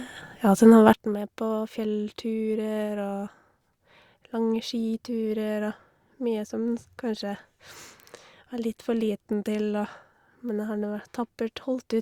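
A digital gain setting was likely applied at 0.93 s without any ramp, cutting the level by about 13 dB from one sample to the next, a sudden gain jump. The drop holds from that point to the end of the clip. Because the change lands in a single step rather than a fade, the speech and the background noise fall together at once, so the whole sound abruptly turns quieter and stays there.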